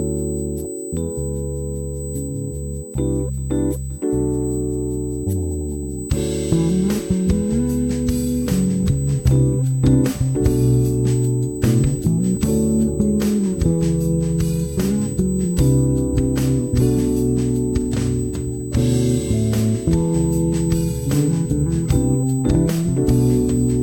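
A steady USB whine runs through the whole clip. It sits at a fixed 8 kHz, about 20 dB below the sound. The bus's 125-microsecond microframes pull current in bursts. That ripple leaks in through power or ground as a thin, high tone.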